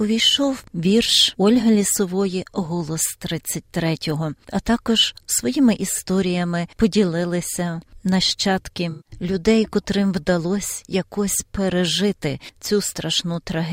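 AAC frame loss with concealment runs from 8.90 to 9.12 s. About 0.15 s of coded audio went missing, consistent with several consecutive AAC frames, and the decoder patched the gap by reusing the last good spectrum, leaving a smeared, noisy, phasey stretch in the sound.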